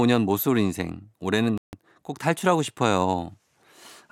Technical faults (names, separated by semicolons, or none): Bluetooth stall